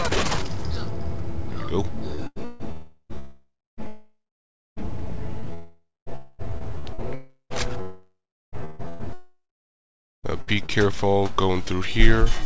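From 2.15 to 10.71 s, and again within 5.53 to 6.42 s, the sound turns choppy, with stretches replaced by synthetic noise. That is likely sound chopped by the voice detector, with comfort noise filling the gaps. At 7.14, 7.81 and 9.13 s the audio trails off into a fading buzz and then silence, lasting about 0.36, 0.72 and 1.1 s, before resuming with material missing. These are likely long network dropouts. Throughout, the call path's band limit leaves nothing above 8 kHz, which fits G.722.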